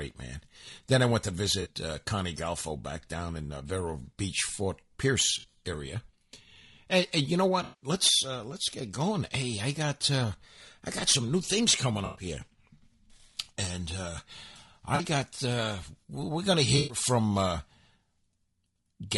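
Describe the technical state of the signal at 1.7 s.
Around 1.7 s the signal is just coming out of an AAC frame loss with concealment that runs from 1.61 to 1.68 s, about 40 ms, which fits two lost frames. With no data to decode, the decoder rebuilt those frames from the last good spectrum, keeping the energy but scrambling the fine detail. The result is a short smeared, noisy or phasey patch. Unlike a plain dropout, there is no silent gap and no hard-edged click, because the concealment bridges the hole.

Under that, the whole passage carries low-delay AAC compression, likely AAC-ELD at a rate pointing to around 32 kbps. At this low bitrate the speech sounds rough and grainy, with noise filling the gaps between harmonics and a lowered or synthetic top band. The damage is plainly audible.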